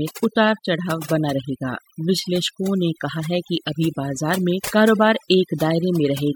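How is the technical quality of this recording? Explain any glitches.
The recording is marred by one processing fault that runs its full length. Overdone noise removal, throughout: frequency bands near the estimated noise are cut hard, leaving a lowered, twinkling background.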